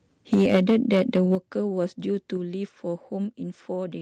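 It's a speech clip, and from 0.33 to 1.35 s you can hear microphone overload: the loudest syllables get a harsh, crackly edge where the peaks are flattened, running about 6 dB past the converter's limit with about 7% of samples cut off. The likely cause is the mic input gain being set too hot for the converter. On top of that there are three sudden microphone volume step-downs, where everything, background included, drops at once: about 3 dB at 0.34 s, about 8 dB at 1.35 s just as the distortion ends, and about 4 dB at 2.37 s. That's likely the call software's automatic gain control reacting to the clipping by lowering the input level in steps.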